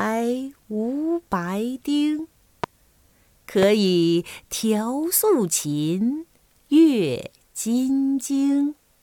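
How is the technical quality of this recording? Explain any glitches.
The recording has two loud pops, about a second apart. The first falls at 2.64 to 2.66 s, the second at 3.63 to 3.65 s. Each is a single sharp pop, roughly 15 dB above the surrounding sound, with the sound continuing underneath. The likely cause is a sudden voltage pulse, from a switch, a plug, static or a driver glitch, entering the signal path. The following circuits shape that brief spike, turning it into an audible crack.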